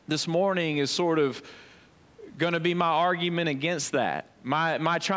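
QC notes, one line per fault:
No faults found in the speech; the call microphone processing shows only as trimmed lowest bass and nothing above 8 kHz, both normal for that path.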